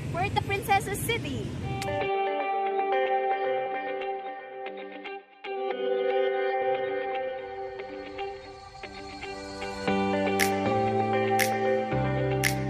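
Compressed frames are skipped at 0.37–0.39 s and 3.65 s (about four 23.2 ms frames, roughly 100 ms lost) and at 10.71 s (about two frames), leaving smeared blips that show as abrupt waveform jumps and brief vertical spectrogram smudges.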